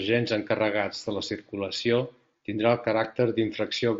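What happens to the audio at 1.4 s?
Nothing goes wrong at 1.4 s: the speech there is intact, carried by the wideband Bluetooth mSBC headset path with its usual band limit just under 8 kHz.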